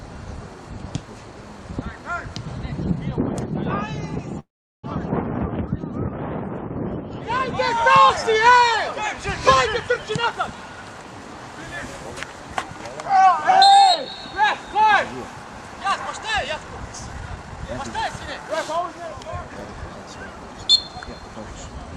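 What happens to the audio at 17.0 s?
Around 17.0 s you're in the middle of a jitter buffer speed-up, running from 16.93 to 18.64 s. The receiver had built up more buffered audio than it wanted, so it trimmed tiny slices, each a pitch period or a few, over and over to catch up. Altogether it drops about a fifth of a second, so playback runs at roughly 111% speed with the pitch unchanged. The sound comes across as noticeably rushed for that stretch.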